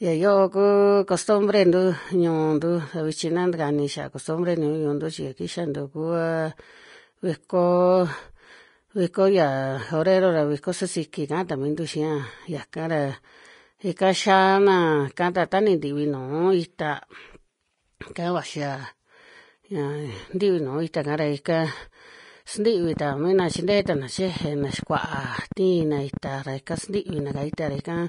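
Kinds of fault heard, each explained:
Vorbis compression: throughout, likely low-bitrate Vorbis coding, nothing above 10.6 kHz, treble quantised into plainly audible hiss and grain, roughened tones.
Train of clicks: 22.84 to 27.97 s, roughly fifty similar pulses at about 9 per second, irregularly spaced, likely interference or a faulty connection.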